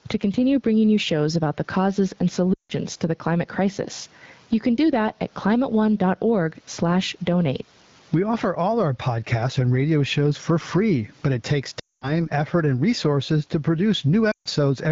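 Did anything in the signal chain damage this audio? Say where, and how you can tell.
Yes. Gain pumping occurs at the input and call-processing stage. Throughout, the background swells by roughly 15 dB in pauses and ducks under loud syllables. This is likely overdriven mic gain feeding a fast limiter. Steady room noise would not breathe like this.

Lost AMR speech frames occur on the network path. They fall at 2.53–2.73 s (after "about the causes and"), 11.79–12.22 s (after "free but it takes") and 14.31–14.48 s. The sound fades to near silence within two frames rather than cutting hard, which is the decoder concealing the missing frames.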